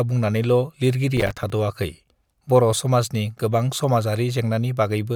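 From 1.17 to 1.50 s, processor overload crackle: around ten missed buffers, each a hard-edged silent gap, forming a gritty burst rather than one click.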